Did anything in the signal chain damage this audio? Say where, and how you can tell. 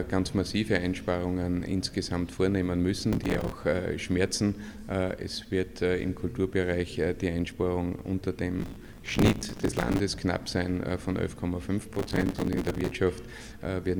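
Yes: processor overload crackle at the driver or buffer stage, in three bursts: 3.13 to 3.52 s, 8.59 to 10.00 s, and 11.94 to 12.91 s. The processor couldn't fill its small audio buffers in time, so deadline after deadline was missed and each gap was patched with a repeat of stale audio. The grain of the crackle fits buffers of around 5 ms, and those hard-edged repeats pile into a gritty tearing that stops once the load eases.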